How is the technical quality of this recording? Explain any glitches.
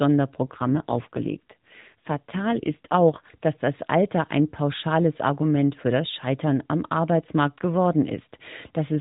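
The recording is narrowband mobile speech, cut off at 4 kHz, with one stretch of reduced quality near the start.

From 0.44 s to 3.26 s there is an AMR rate drop. The codec is forced down to a lower mode, likely because of a weak radio link, where fewer bits go to the voice model and more to error protection. Here it sounds like a fall from 12.2 kbps to about 5.9 kbps. The band and timing stay intact with no gap, but the voice turns buzzier and more synthetic until the rate recovers at 3.26 s.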